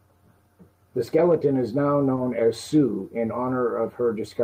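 Short concealed packet loss occurs at 2.15 to 2.19 s. About 20 ms of the speech arrived too late for the decoder, so the receiver extended the preceding sound to cover the gap and then blended back into the real audio, leaving a brief smeared wobble.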